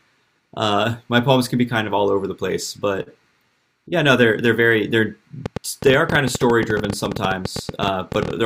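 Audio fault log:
5.46–8.31 s: train of clicks, about forty similar popping ticks at roughly 12.6 per second with uneven spacing, peaking about 10 dB above the speech and audible in pauses. The likely cause is interference or a faulty connection or power supply; unlike random crackle, the clicks share one shape.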